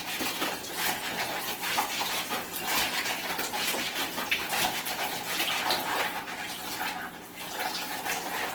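Opus compression runs the whole way through: grainy, rough, noise-filled texture, likely from music-mode Opus at a starved bitrate around 16 kbps, though bandwidth reaches 20.1 kHz.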